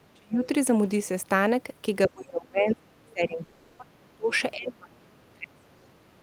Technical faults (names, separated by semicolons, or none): speech suppressed in double talk; long network dropout; other side's voice leaking through